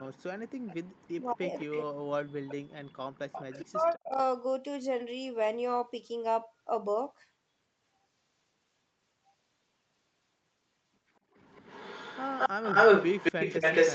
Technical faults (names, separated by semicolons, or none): echo leak; speech suppressed in double talk